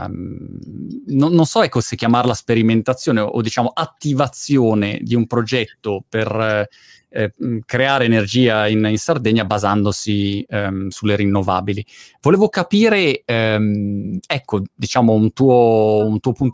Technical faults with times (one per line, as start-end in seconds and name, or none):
none